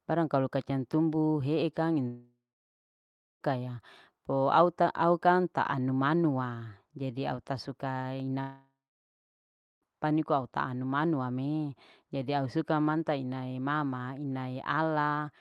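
From 2.07 to 3.43 s, and again from 8.41 to 9.84 s, the speech breaks into a brief fading buzz, then about a second of silence, and resumes with roughly 1.3 to 1.4 s missing. A long network dropout is the likely cause, with the receiver briefly extending the last sound before going quiet.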